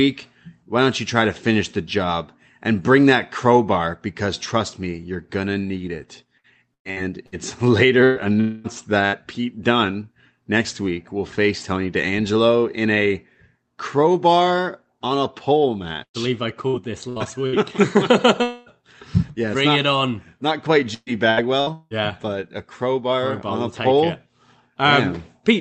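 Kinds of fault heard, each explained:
Repeated packet loss (robotic sound): Packets kept going missing, and each hole was patched by continuing the previous sound, giving choppy stretches at 6.37–7.35, 16.03–17.56 and 20.94–21.93 s. On a spectrogram, harmonics freeze into short flat bands, and the waveform shows repeated identical cycles.
Burst of packet loss: A short run of packets went missing around 8.04 s (about 120 ms) and 9.06 s (about 60 ms). The last sound is held and faded and then jumps ahead. Harmonic lines stretch flat and dim, and the waveform envelope tapers.
Long network dropout: Around 8.41 s and 18.43 s, roughly 240 ms of audio never arrived, likely from a longer network interruption. The receiver stretches the last sound into a decaying continuation rather than silence. On a spectrogram, smeared bands gradually fade, and the waveform shrinks before the sound resumes further along.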